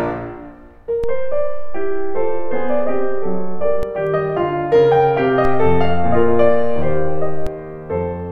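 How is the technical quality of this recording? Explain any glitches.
The music suffers two DC steps. The converter's zero line jumps by about -14 dBFS from 1.04 to 3.83 s and about -12 dBFS from 5.45 to 7.47 s, giving a low thump at each jump while the music carries on unchanged.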